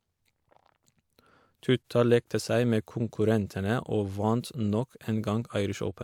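No technical faults are audible.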